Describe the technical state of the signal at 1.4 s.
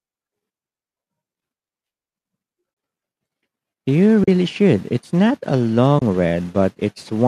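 At 1.4 s the speech is intact, with no fault at that moment; the low-delay AAC compression it likely passed through is working normally there.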